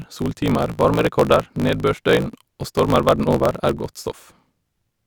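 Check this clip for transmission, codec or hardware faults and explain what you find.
There is a fault running through the whole speech clip: a block size mismatch (truncated). One stage writes longer blocks than the next reads, so each block's tail is discarded. That chopping leaves a buzz at 54.4 Hz, fitting 1024-sample blocks, and the speech runs 1.16 times fast at roughly normal pitch.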